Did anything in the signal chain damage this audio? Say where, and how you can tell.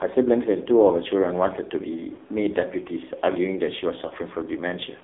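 Yes. The damage is in the codec stage and in the network stage.

The AMR narrowband mobile codec shapes the whole clip. The speech is confined to about 250 Hz to 3.7 kHz, with nothing above the 4 kHz ceiling of 8 kHz sampling. The coding damage is heavy: voiced sounds come out buzzy and synthetic. That points to one of the low AMR-NB modes, around 5.9 kbps, where the few excitation pulses per subframe cannot model the voice closely.

Lost AMR speech frames cause two brief defects, at 2.14 to 2.18 s and at 4.08 to 4.13 s. Each is a short dip or warble, not a gap of silence. Each fits a single 20 ms frame that failed its checksum over the radio link. The decoder filled the gap by repeating the previous pitch and vocal-tract parameters at reduced gain, and the speech comes back weak or rough just afterwards.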